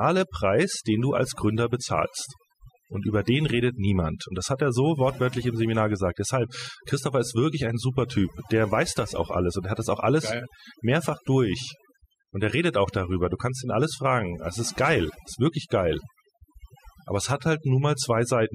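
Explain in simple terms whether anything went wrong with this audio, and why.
Something did go wrong, and it lasts the whole clip. The problem is overdone noise removal. A cleanup tool meant to strip out background noise was set far too strong on this speech. It treats any slice of sound that resembles the noise as noise and shuts it off. The softer parts of the voice get caught too. So the pauses drop to near silence with twinkling specks.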